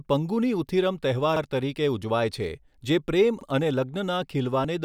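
A speech clip with two brief stutters, at 1.36 s and 3.41 s, where about 48 ms of sound plays twice. These are overlapping chunks: the audio was handled in 2-second pieces, and each new piece began slightly before the previous one ended, duplicating the overlap.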